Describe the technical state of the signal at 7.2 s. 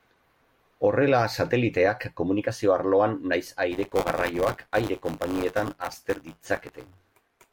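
At 7.2 s there is buffer tearing, from 3.7 s, after "sateliteak komunikazio arloan nahiz", to the end. Writer and reader cross each period, splicing in a sliver of audio about 20 ms old. The result is a 100 Hz robotic rattle that, unlike dropouts, leaves no gaps and vanishes in silence.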